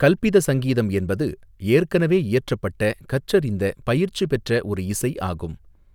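No technical faults are audible.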